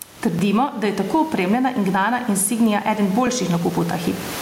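Throughout the recording there is gain pumping. The room noise sits about 28 dB below the speech, and the gain swings by around 15 dB. The likely cause is input gain set far too high with a fast limiter clamping each loud syllable. That makes loud and soft passages sit close together and sound squashed.

At 0.39 s, just before "da je tako opremljena", there is a repeated buffer. Audio did not arrive in time, so the last short block played once more. The repeated piece is about 10 ms, which fits a 10 ms buffer. It gives a sharp click or brief buzz with a hard join, and nothing is missing afterwards. The same thing happens at 3.27 s, right after "gnana insignia eden". A dropout would leave a gap and lose sound. Here a slice is doubled instead, so the timing stretches slightly but nothing is skipped.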